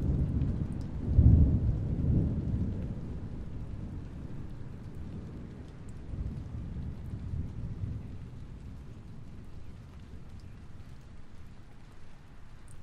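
Everyday sound recording, nothing technically wrong found on listening.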